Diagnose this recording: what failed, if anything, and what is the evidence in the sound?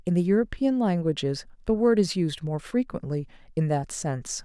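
Nothing in the chain has failed: the speech signal stays continuous and intact at every stage from capture through to playback.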